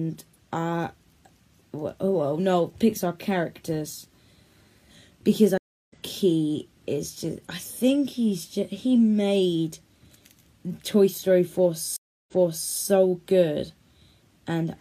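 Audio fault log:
5.58–5.93 s, stream reconnect: a 0.3 s dropout while the connection re-established, then a fresh decoder picks up about 0.4 s further on, skipping material.
11.96–12.75 s, stream reconnect: 0.31 s of silence, then playback resumes 0.46 s earlier as the server resends buffered data, so that stretch is heard twice.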